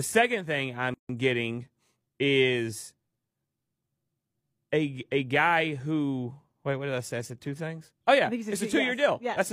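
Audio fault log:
0.94 to 1.09 s, gap at a join of encoded pieces: separately encoded segments were joined untrimmed, leaving encoder start delay and last-frame padding. A silence of about 150 ms, its edges smeared by the codec, opens between "second thing" and "getting is," then speech resumes where it stopped.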